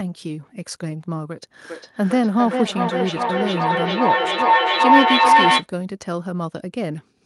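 From 1.65 s to 5.7 s a feedback howl builds over the speech. Sound from the loudspeaker re-enters the microphone and gains level on every pass, which comes round roughly every 0.4 s, narrowing to a tone near 1 kHz that peaks about 6 dB above the speech.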